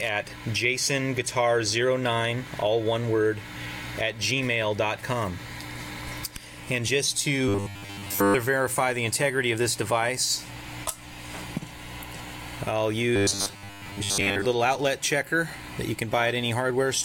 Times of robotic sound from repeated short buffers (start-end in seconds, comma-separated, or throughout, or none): 7.48-8.35, 13.16-14.47